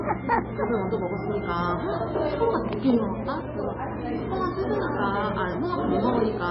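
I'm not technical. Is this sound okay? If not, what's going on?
No. Heavy MP3 compression runs through the whole clip. Nothing above about 5.6 kHz remains, so the sound is dull and muffled, with the crisp top end gone. Quiet details flicker in and out, giving a watery, swirly texture, and sharp starts sound smeared. The likely cause is saving the audio at a very low quality setting, where the format drops the treble and any detail it judges unimportant to save space.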